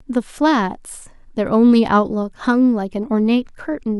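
Nothing technical stands out in this bit of speech, so there's no problem to report.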